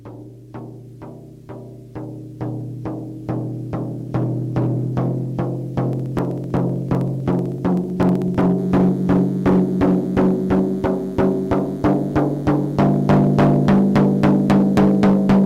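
From 5.93 to 8.41 s, regular ticks every 63.5 ms mark periodic USB or driver dropouts: a background task stalls the audio path, skipping well under a millisecond each time. From 8.58 s to the end, a thin, steady 100 Hz buzz sits about 30 dB below the sound, DECT cordless phone buzz from rectified radio bursts every 10 ms.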